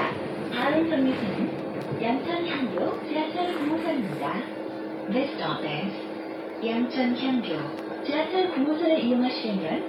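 No technical faults are audible at any point in the audio.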